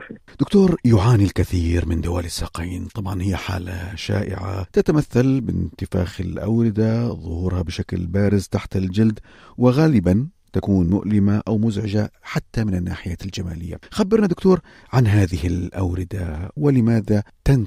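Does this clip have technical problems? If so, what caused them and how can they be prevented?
Yes. At 16.57 s the sound jumps forward abruptly, with a short piece of about 50 ms missing and the two sides butted together without any gap. This is audio missing between chunks, likely from a recorder handing over between 6-second blocks. Prevent it by using overlapping or double-buffered chunk writes so capture continues during each handover.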